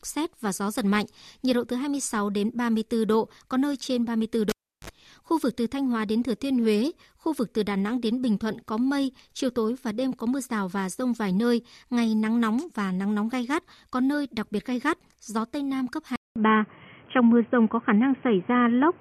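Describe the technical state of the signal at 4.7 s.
At 4.7 s the signal sits inside a cable pulled and plugged in event spanning 4.49 to 4.90 s. A live lead is yanked out, giving a pop at 4.49 s and about 0.35 s of near silence, which is where 4.7 s falls. As the plug goes back in, only the tip connects for about 50 ms, letting in a 50 Hz mains buzz, and a second pop marks the speech returning at 4.90 s.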